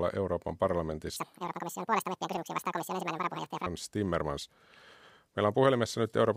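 From 1.16 s to 3.66 s the audio is read two samples at a time. Each pair is taken as one frame, so the speech runs at double speed, an octave higher. Unlike a clean rate mismatch, any strong content above a quarter of the sample rate folds back.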